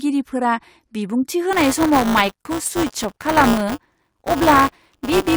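Speech, with buffer tearing from 1.53 s to the end: a robotic 200 Hz buzz, as writer and reader cross each period and replay roughly a tenth of audio from about 10 ms earlier.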